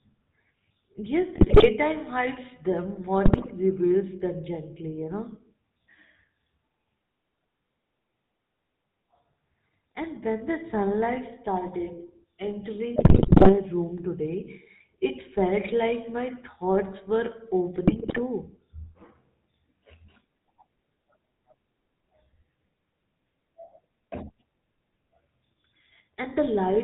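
A buzzy, gravelly roughness runs through the whole speech recording, with nothing audible above 4 kHz. This is the GSM full-rate codec, whose character fits its 13 kbps coding: a vocal-tract model driven by regularly spaced pulses, with two of every three excitation samples discarded.

GSM bit errors break in at 1.35 to 1.69 s, just before "hides them"; at 3.25 to 3.54 s, between "hides them" and "reveals them gently you"; at 12.96 to 13.53 s, the longest and harshest, just before "room today it felt"; and at 17.87 to 18.20 s. Each burst squawks, pops and gargles because corrupted filter, pitch and gain values warp the spectrum or spike the level frame by frame.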